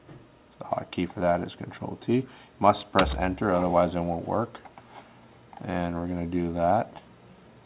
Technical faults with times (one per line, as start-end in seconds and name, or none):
none